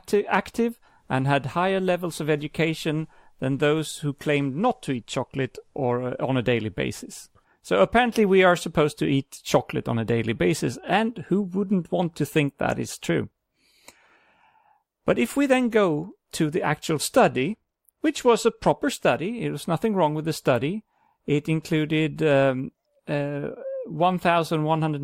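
From 4.36 to 5.95 s, after "education than those who", the speech goes dull and gritty. This is a Bluetooth SBC bit pool drop. Starved of bits, the top sub-bands vanish and the rest coarsen. The sound fits a pool falling from 31 to 15, near 105 kbps. It recurs from 16.84 to 18.73 s, after "then go to the".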